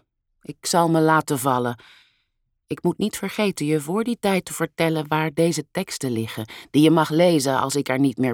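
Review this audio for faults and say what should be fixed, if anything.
Nothing needs fixing here; no faults can be heard.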